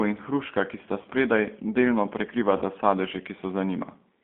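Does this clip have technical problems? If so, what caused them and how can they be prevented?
Yes. The call ran through the G.729 codec, which models speech with a vocal tract filter, a pitch predictor and a few pulses per frame, consistent with a low-rate 8 kbit/s coder. The result is a 200 Hz to 3.5 kHz band and a plainly audible rough, synthetic edge throughout. A wideband codec with a higher bitrate would prevent this.

VoIP packet loss concealed by the speech codec occurs at 1.02 to 1.07 s and 2.58 to 2.63 s. Each time, about 30 ms of audio went missing, which fits a single lost packet. The decoder stretched its last pitch and filter into a fading buzzy or noisy fill, and the sound stays weak or distorted just after. A jitter buffer with forward error correction or redundancy on a less congested network would prevent this.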